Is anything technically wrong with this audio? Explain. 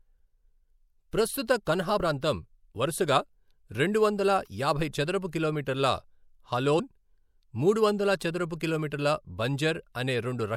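Yes, two spots have compressed frames skipped. At 1.98 s, between "ప్రస్తుత కన్హా" and "ప్రాంతం వరుసగా", about 50 ms vanishes, and at 6.78 s about 20 ms does. The decoder jumps ahead by whole frames, consistent with a 24 ms frame.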